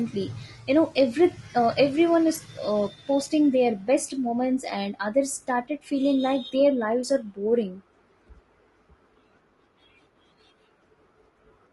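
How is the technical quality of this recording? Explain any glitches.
The speech carries audible codec damage from start to finish, and it's the one real flaw here. Low-delay AAC compression is the likely culprit, the AAC-ELD flavour used in video calls. Its short frames can't separate the pitch harmonics cleanly and spend bits fast, so the voice comes out rough and grainy, with noise filling the gaps between harmonics and a thin, synthetic top end. The damage level fits a bitrate around 32 kbps.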